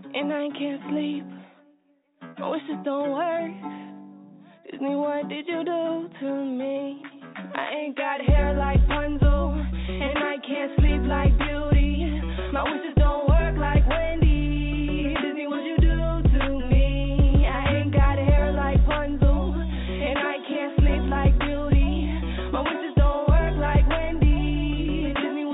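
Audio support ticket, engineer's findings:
Signal arrives over a call path whose 4 kHz ceiling fits G.711 mu-law at 64 kbps, and no faults found.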